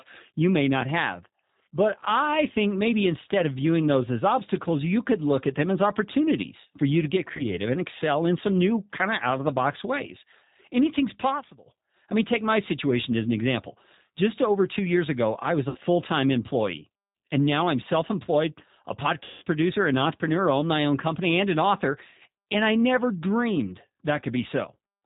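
Throughout, the speech has been squeezed through the G.729 codec at 8 kbit/s. The codec rebuilds each frame from a vocal tract filter and a few pulses, and drops everything above 4 kHz, so the voice sounds plainly rough, muffled and slightly synthetic.

At 7.37 s there is VoIP packet loss concealed by the speech codec. The decoder fills the 20 ms gap, which fits a single lost packet, by stretching its last pitch and filter. The result is a brief buzzy smear lasting until about 7.45 s.

From 11.11 to 11.75 s a loudspeaker feedback squeal appears. A microphone is hearing its own loudspeaker, and at 5.5 kHz the loop gain tops one. A thin whistle swells over roughly a third of a second to stand about 5 dB above the speech.

Two more concealed losses follow. At 15.69 s, 60 ms is missing, pointing to about three packets. The decoder's extrapolation turns buzzy and fades, with the voice staying weak until 15.78 s. 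At 19.24 s a longer 180 ms hole, consistent with nine packets, stretches into a decaying tone or coloured noise. Distortion then lingers as the decoder recovers until 19.44 s.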